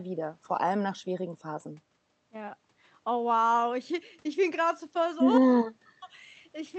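No faults found in the speech; the call path shows only its ordinary coding, with the top end stopping at 8 kHz.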